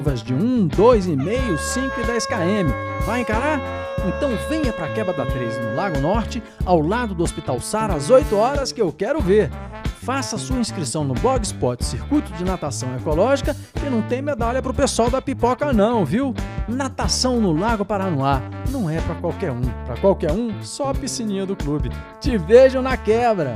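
No technical faults are audible.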